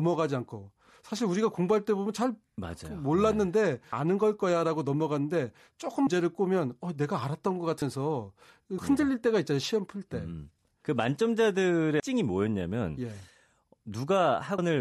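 Compressed frames are skipped at 3.92, 6.06, 7.81, 8.78, 12.0 and 14.58 s. The speech jumps ahead by roughly 0.15 to 0.7 s, whole multiples of 26.1 ms frames, with smeared blips rather than hard clicks.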